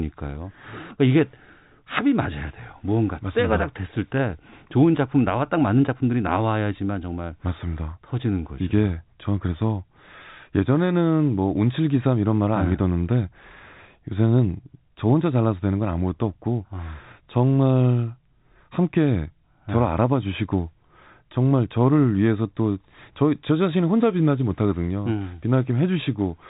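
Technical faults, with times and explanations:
No technical faults are audible; the speech sits in the expected G.711 telephone band, with nothing above 3.8 kHz.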